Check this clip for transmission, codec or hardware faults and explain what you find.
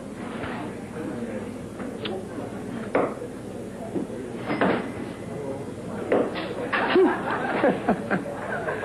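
No transmission, codec or hardware faults turn up anywhere in this clip.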